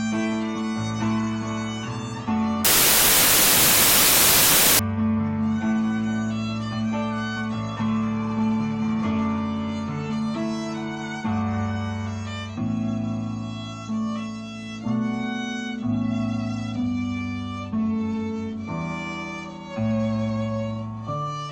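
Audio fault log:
2.65–4.79 s, samples built from the wrong bytes: for about two seconds the audio turns into loud, harsh broadband noise, because the reader is putting each sample's bytes together wrongly, so the jittery low bits end up as the big part of every value.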